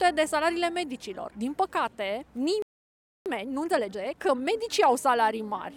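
The audio cuts out dead at 2.62 s and stays silent until 3.26 s, a playback stall of roughly 0.64 s. The sound just stops mid-flow, and the likely cause is the player running dry on data or having its thread blocked for that stretch. Right after it resumes there's a time-compressed catch-up from 3.26 to 4.52 s. The player chops out small slices and cross-fades the rest to clear its backlog, so the sound runs at about 1.5 times normal speed at unchanged pitch.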